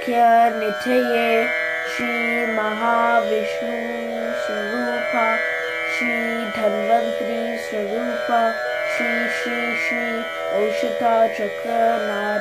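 Gap between stream segments at 2.00 s and again at 8.97 s. At each point the timestamps of two adjoining segments, which appear to be about 1 s long, fail to meet, so the player pads the difference with silence, roughly 4.5 ms at the first join and 4.1 ms at the second. Nothing is cut from the sound itself; it is simply pushed later. Each hole has abrupt edges and is heard as a brief click-like dropout.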